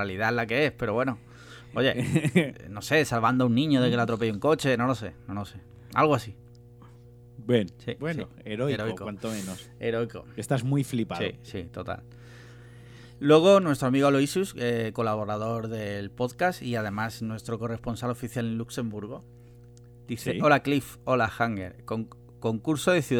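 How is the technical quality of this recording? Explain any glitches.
A mains hum runs under the speech for the whole clip, from start to finish. Power-line current is leaking into the audio path, most plausibly through a ground loop between connected equipment or from a transformer close to the cabling, and it carries the 60 Hz supply frequency with it. The result is a steady low drone at 60 Hz with some low harmonics above it, sitting roughly 25 dB under the speech level.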